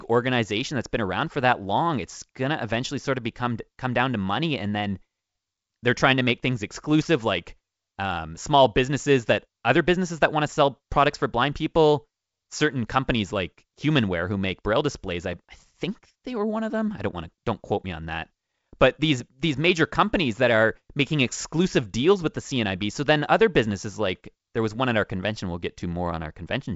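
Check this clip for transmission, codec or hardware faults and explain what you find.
No faults found in this speech recording.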